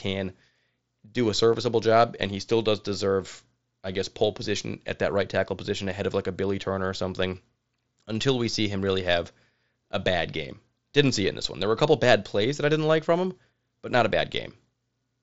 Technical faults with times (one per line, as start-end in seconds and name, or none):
1.53 concealed Bluetooth headset packet loss